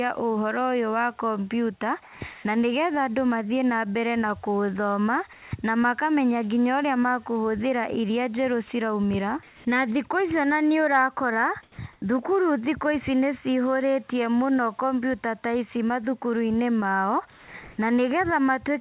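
A speech recording carried over a narrowband call path with nothing above 4 kHz, its pauses show comfort noise in place of the background at 2.03–2.21, 2.33–2.45, 5.33–5.51, 9.47–9.65, 11.63–11.78 (after "ici ona nĩũrakora"), 11.93–12.02, 17.3–17.54 and 17.63–17.78 s (after "ta ici mathukuruinĩ mao"). The real room noise gives way to flat, featureless hiss, mostly about 4 to 7 dB quieter but about 4 to 5 dB louder at 2.33 and 17.63 s. This is likely discontinuous transmission with the receiver synthesising filler. On a spectrogram these gaps appear as smooth, evenly textured bands with abrupt level steps at each edge.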